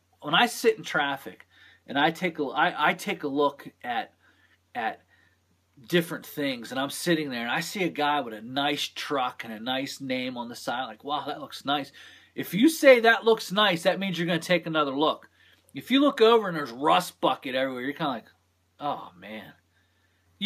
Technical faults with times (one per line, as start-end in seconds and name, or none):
none